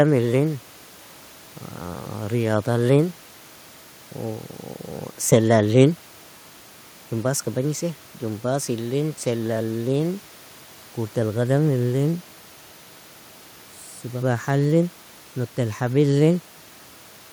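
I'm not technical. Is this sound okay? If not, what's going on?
Yes, I listened closely and nothing stood out as a problem.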